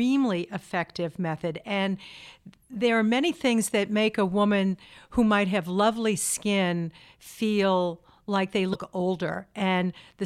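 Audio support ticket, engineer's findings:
Brief glitch and skip in speech, 8.71 to 8.76 s, after "skin feel like they". Likely broken MP3 bit reservoir: missing frames corrupt following data. Unlike a clean dropout, the audio jumps ahead.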